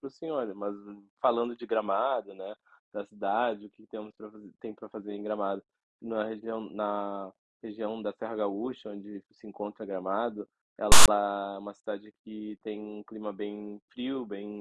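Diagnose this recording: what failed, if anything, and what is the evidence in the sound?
At storage or playback, file tags played as audio: from 10.92 to 11.08 s the speech is replaced by a hard-edged, offset rasp from text tag bytes, then silence from zero padding.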